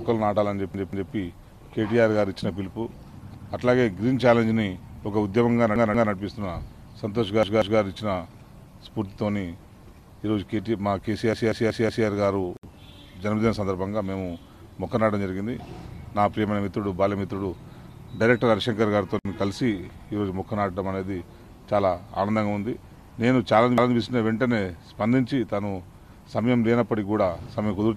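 Stutters break up the sound six times: a piece of roughly 186 ms plays again with a hard join at each repeat, twice over at 0.74–1.12 s, once at 3.34–3.53 s, twice at 5.76–6.13 s, twice at 7.43–7.80 s, four times at 11.33–12.07 s and once at 23.78–23.96 s. This is a repeated buffer: fresh audio failed to reach the output in time, so the device replayed its last block, a length that fits an 8192-sample buffer, and the sound resumes with nothing skipped. Twice the audio drops into a brief silence with abrupt, slightly smeared edges and then carries on from where it stopped, about 65 ms at 12.57 s and about 61 ms at 19.19 s. Each is a gap at a join of encoded pieces, where separately encoded sections were spliced without trimming the encoder's start-up delay and end padding.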